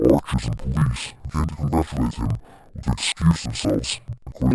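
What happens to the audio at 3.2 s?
At 3.2 s the speech sits an octave low, doubled and choppy, from interleaved audio read as planar throughout. Each 48 ms block splits wrongly into halves.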